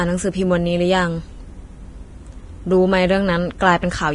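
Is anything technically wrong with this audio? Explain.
Yes. Throughout the speech, nothing is present above 10.6 kHz, and the upper range that remains is grainy and hissy, with roughened tones and smeared consonant onsets. The likely cause is heavy Vorbis compression at a rate that fits roughly 30 kbps. The encoder keeps a smooth spectral outline but quantises the treble so coarsely that fine detail turns into noise of similar energy. A plain low-pass filter would sound dull yet clean. Here the band below the cut-off is itself noisy.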